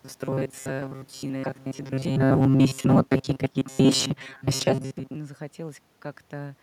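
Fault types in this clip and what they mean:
Robotic sound from repeated short buffers: From the very start to about 5.16 s the speech carries a stiff, metallic buzz locked at 134 Hz. That likely comes from late audio being covered by replaying the last chunk of roughly 7.5 ms over and over, through most of that stretch.
Automatic gain falling: Between 1.99 and 4.04 s the gain control finds the input too loud or its background too strong and gradually pulls its gain down by about 4 dB, so the speech and the room background behind it sink together, unlike a talker simply shifting position.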